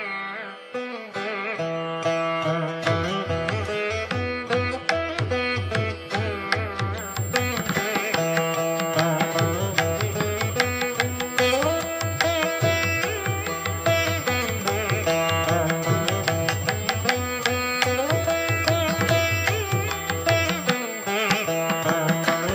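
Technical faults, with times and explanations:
6.98 s to 22.54 s, switching supply whistle: a high, steady-ish tone near 7 kHz enters at 6.98 s and continues to the end of the clip, sitting roughly 15 dB below the programme level. Its pitch wanders within a narrow band from about 7.37 kHz to 7.54 kHz. The whistle comes from a switching power supply either running in an audible burst mode or beating against another supply, with the small pitch movement tracking changes in load.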